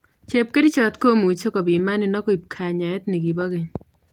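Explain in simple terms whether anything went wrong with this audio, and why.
Nothing went wrong: the speech has been through Opus voice compression at full bandwidth, with sound reaching up to 20.2 kHz, and the coder leaves only light wear on it.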